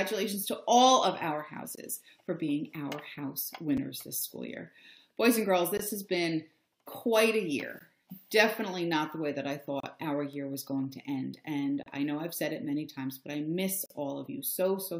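Gaps between stream segments cut hard-edged silences into the sound every 2 s. They fall at 1.75–1.78 s, 3.77 s, 5.77–5.79 s and 7.79 s, and are blank vertical stripes on a spectrogram and flat silent runs in the waveform. The two segments' timestamps leave a hole, and the player pads it with silence. A bit error spike at 4.03 s is one flipped bit in a single sample. It jumps by a power of two and returns, giving a sharp tick: a one-sample needle in the waveform and a thin full-band line on a spectrogram. The gaps continue at 9.80–9.83 s and 11.83–11.86 s, each about 30 ms. Further single-sample ticks come at 10.33 s and 13.72 s. The last and longest gap, about 42 ms, falls at 13.86–13.90 s.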